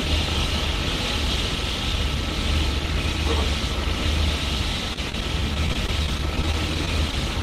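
From 4.93 s to 7.13 s, the sound breaks up with repeated packet loss, giving a robotic quality. Around twenty short holes fall across this stretch, none longer than about 21 ms. Packets went missing or arrived late, one after another. Each hole was patched by stretching the last good sound, about 270 ms of fill in all. Some 170 ms was simply lost. The result is choppy, with small pieces dropping out.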